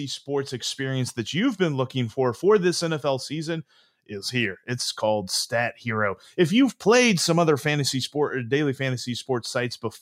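No technical faults can be heard anywhere in the recording.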